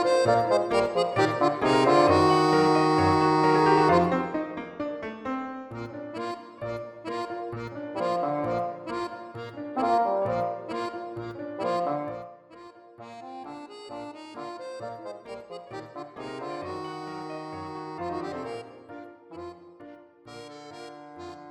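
Between 11.93 and 12.28 s the level drops by roughly 15 dB with zipper noise: the gain moves in coarse, unsmoothed steps, around a hundred per second, each adding a faint click. A waveform shows a staircase envelope, and a spectrogram shows evenly spaced thin vertical lines.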